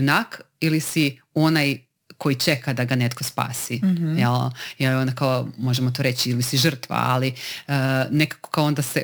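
Speech runs with sample clock jitter from start to finish: timing wobble of around 10 microseconds leaves an error roughly 20 dB below the signal, a hiss that swells on loud, bright syllables and disappears in pauses, unlike a steady noise floor.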